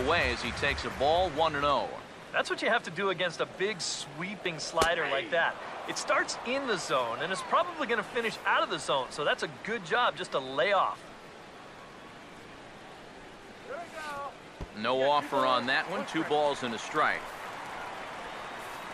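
At 4.46 s there is a small jump forward in the sound, where roughly 15 ms of audio goes missing and the two sides meet with no gap of silence between them. The likely cause is a dropped buffer (overrun): the samples were not collected before the hardware overwrote them. On a waveform this appears as an abrupt discontinuity in the trace, and on a spectrogram as a thin vertical broadband line.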